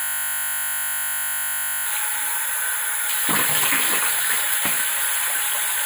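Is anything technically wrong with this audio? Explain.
Yes, three kinds of fault are present.

From the very start until 1.86 s there is a system hang loop, already running when the clip begins. The host stalled while the hardware kept replaying one 20 ms stretch of its buffer, so the sound becomes a steady 50 Hz buzz rather than a stutter.

At 2.52 s and 5.45 s, compressed frames are skipped. The decoder dropped blocks of data, so the audio jumps ahead by about 200 ms and then about 50 ms. That fits roughly ten and two frames of about 23 ms each.

Throughout, a channel delay causes comb filtering. One channel trails the other by a tiny fraction of a millisecond, consistent with a few samples. When the two are summed, the first cancellation notch falls around 5 kHz, leaving the top end hollow and phasey.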